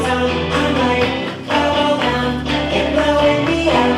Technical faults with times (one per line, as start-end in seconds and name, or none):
none